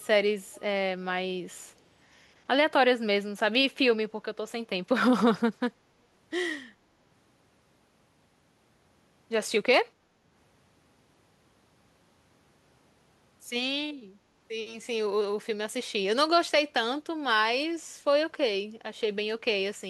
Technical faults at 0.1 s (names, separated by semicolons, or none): echo leak